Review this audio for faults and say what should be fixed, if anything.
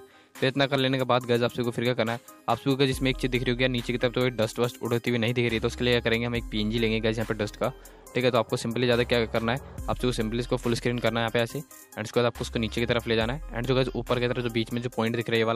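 No faults turned up in this audio, so nothing needs to be fixed.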